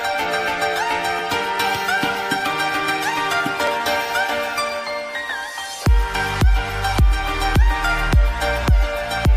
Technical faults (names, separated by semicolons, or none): audio missing between chunks